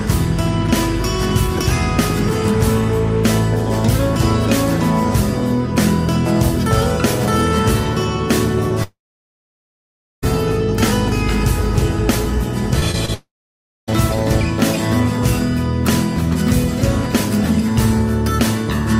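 From 8.83 to 10.24 s the sound is carried on briefly, fades, and then goes silent for about 1.3 s before the audio returns with roughly 1.4 s missing. This is likely a long network dropout, where nothing arrived and the receiver could only extend the last sound and then leave silence.

Brief smears at 12.79, 12.91 and 13.06 s, each about 20 ms, are short concealed packet loss. Each lost fragment was patched by continuing the preceding sound and then blending back into the real audio.

From 13.14 to 13.89 s what is likely a second long network dropout follows the same pattern: the last sound is continued, then there is about 0.6 s of silence, and about 0.74 s of audio never comes back.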